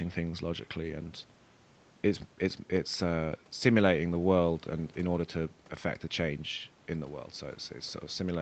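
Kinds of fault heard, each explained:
No kinds of fault are heard in this speech, which comes through a call's microphone processing and Opus codec with nothing above 8 kHz.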